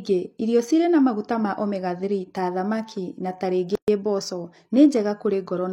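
A gap at a join of encoded pieces opens at 3.75 s, right after "ta thamaki na", and lasts until 3.88 s. The speech was encoded in separate pieces, apparently 4 s long, and joined untrimmed. Encoder start delay and final-frame padding leave a gap of about 126 ms with smeared edges before the speech resumes where it stopped.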